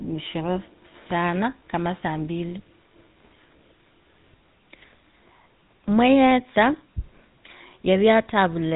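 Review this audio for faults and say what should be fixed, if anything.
GSM full-rate codec damage runs through the whole speech clip: nothing above 4 kHz, and a buzzy, gravelly roughness from pulse-driven excitation, which fits 13 kbps. Keep the original recording, or use a wideband codec.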